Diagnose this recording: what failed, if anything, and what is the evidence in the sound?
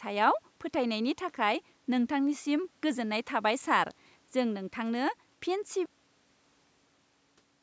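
Cut-off end, buffer stage: the final buffers were never written, so speech halts mid-sound at 5.86 s into digital silence with no decay, unlike a fade-out.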